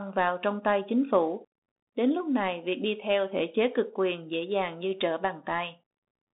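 The whole recording passes through a Bluetooth CVSD headset codec. The speech sits in a narrow band, about 200 Hz to 3.7 kHz, with nothing above 3.8 kHz. One-bit slope coding, consistent with 64 kbps, leaves granular hiss. S sounds turn scratchy. Loud high sounds distort audibly.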